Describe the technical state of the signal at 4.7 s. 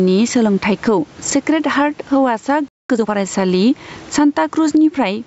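At 4.7 s the signal shows gain pumping, which runs through the whole clip rather than starting or stopping near that point. The level visibly breathes: the gain swings by something like 15 dB as the speech gets loud. That pattern likely comes from the input gain being set far too high, with a fast limiter or compressor clamping each peak, leaving the speech squashed and the dynamics flattened.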